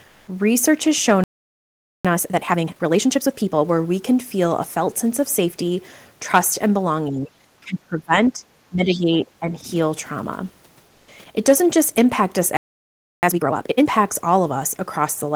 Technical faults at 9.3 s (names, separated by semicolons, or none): speech suppressed in double talk